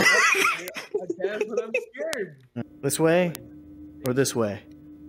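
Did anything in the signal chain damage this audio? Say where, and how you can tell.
Yes. Bit error spikes from corrupted bits in storage or on a digital link: at 0.68, 2.13, 3.35 and 4.06 s one sample (three at 2.13 s) jumps by a power of two and snaps back, giving a sharp broadband tick unrelated to the sound.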